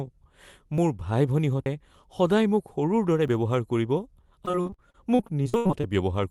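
Dropped buffers (overrun) hit this speech clip at 0.78, 1.66, 3.28 and 5.54 s. Each is a sudden skip ahead where samples were overwritten before being collected, likely an input overrun, losing around 20, 70, 20 and 40 ms respectively, just before "সদায় মোক সৰুৰ দৰে" and between it and "ব্যৱহাৰ কৰিব". Repeated packet loss (robotic sound) runs from 4.45 to 5.85 s, after "সৰুৰ দৰে ব্যৱহাৰ কৰিব". Over this stretch, many short holes, the longest about 80 ms, are patched by stretching the preceding sound, so roughly a third of the span is concealed filler and it comes out choppy. All of this travels over an Opus call path, which caps the audio at 12 kHz.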